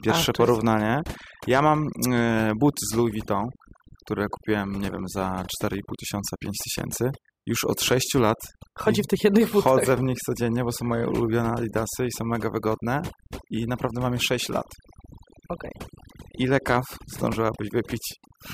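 From start to finish the speech carries overdone noise removal: an overly aggressive noise reducer cuts individual frequency bands whenever they sit near its noise estimate. The background drops to near silence dotted with twinkling specks. A spectrogram shows isolated bright flecks scattered across a dark floor and ragged holes through the speech energy.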